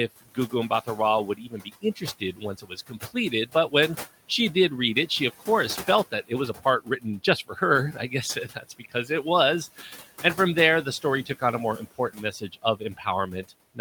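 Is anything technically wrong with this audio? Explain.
Yes. Noise suppressor artifacts run through the whole clip. The suppressor pulls the room noise, which sits about 18 dB below the speech, down by about 15 dB frame by frame. The noise sinks in pauses and swells back under the voice. Untreated room noise would instead stay at a steady level.

Speech cut by the noise suppressor happens at 0.21–0.98, 1.35–3.73, 5.87–7.62, 7.93–9.25, 9.77–10.38, 10.84–11.42 and 11.77–13.79 s. The suppressor mistakes soft speech for noise and ducks it by about 11 to 18 dB. Consonants and endings sound swallowed in short bites, from a fraction of a second to about a second per stretch, rather than as a whole-phrase level drop.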